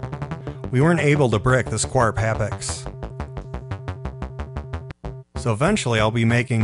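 No technical faults are audible anywhere in the clip.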